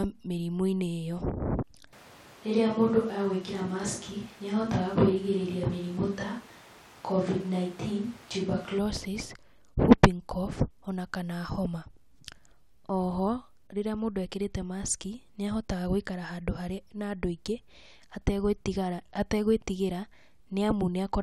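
From 1.93 to 8.79 s, a likely switch to a distant microphone makes the voice abruptly roomy, hollow and bass-light at a similar level, with room noise about 25 dB below the speech.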